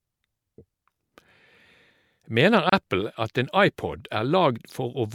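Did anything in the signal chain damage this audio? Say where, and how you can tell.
Yes. The damage sits at the codec stage, where separately encoded pieces were joined. At 2.70 s the speech drops into a silence of about 30 ms, ending at 2.72 s. The codec smears its edges, so the silent part is shorter. The speech then resumes exactly where it stopped, with nothing lost. That is a gap at a join of encoded pieces. Each piece kept its encoder start-up delay and last-frame padding, and the join was never trimmed.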